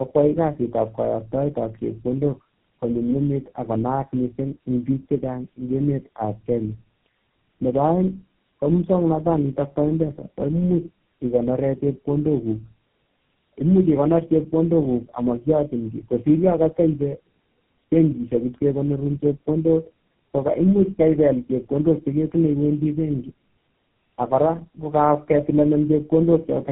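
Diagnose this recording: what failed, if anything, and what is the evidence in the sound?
Tandem speech coding at the codec stage: the speech is rough, muffled and warbly throughout, empty above 3.8 kHz, pointing to three low-rate codecs re-encoding in succession.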